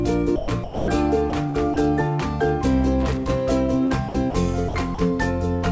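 From 0.36 to 0.88 s, the sound cuts in and out, with about 360 ms swapped for synthetic hiss. The same choppy flicker returns at 1.30 to 1.76 s, 3.86 to 4.34 s and 4.68 to 4.98 s, losing roughly 80 to 140 ms each time. This is likely sound chopped by the voice detector. It kept switching transmission off, and comfort noise filled the gaps.

Between 3.00 and 3.32 s, an irregular burst of scratchy crackle breaks through. This is loose connector crackle. A poor contact made and broke the circuit, chopping the signal into rough fragments.

At 5.56 to 5.64 s, a burst of packet loss occurs. The last sound is stretched for about 60 ms and fades. The audio then jumps ahead, with that stretch gone. Throughout, the call codec leaves nothing above 8 kHz, which fits G.722 at 64 kbps.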